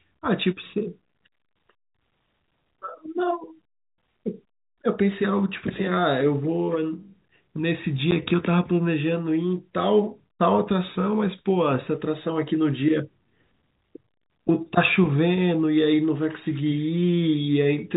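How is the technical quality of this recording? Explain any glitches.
The recording has one audible glitch, a short dropout caused by packet loss filled with silence. The sound carries the narrow telephone band of G.711 coding, with nothing above 4 kHz.

At 8.11 s, one packet of audio, about 10 ms, never arrived, and the receiver played digital silence in its place. The sound stops dead and resumes at hard edges. Unlike a concealed loss, which smears or repeats the preceding sound, this gap is truly empty and hard-edged, with exactly one packet's length missing.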